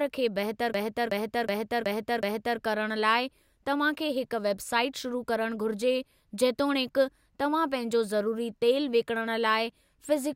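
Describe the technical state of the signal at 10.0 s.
At 10.0 s the speech signal is intact, with no dropout, clipping, glitch or other technical fault.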